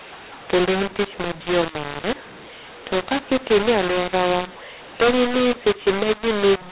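mu-law and A-law mixed up throughout: mu-law telephone speech is decoded as A-law, scrambling levels so the speech turns harsh and distorted while pauses fill with noise.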